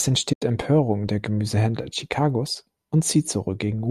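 At 0.33 s the speech drops into a soft-edged gap that lasts until about 0.42 s, around 90 ms. That's AAC frame loss with muting. The decoder zeroed the missing frames, and the overlapping windows fade the sound out and back in. The gap fits roughly nine short frames of the low-delay AAC that is likely carrying this audio.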